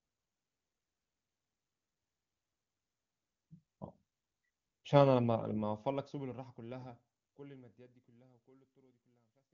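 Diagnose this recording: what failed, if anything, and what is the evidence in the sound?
Nothing failed in this recording, and the sound gives no evidence of a fault.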